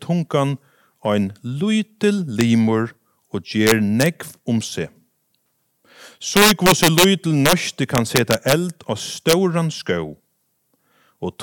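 Violent, splintering cracks break through the loud moments of this speech: a single snap at 2.41 s, then bursts from 3.67 to 4.06 s, 6.37 to 7.04 s, 7.46 to 7.53 s, 7.95 to 8.53 s and 9.29 to 9.33 s. This is integer overflow. The signal was pushed roughly 1 to 5 dB past the largest integer value, worst around 6.4 to 7.0 s, and each over-limit peak wrapped to the opposite extreme instead of being held at the ceiling.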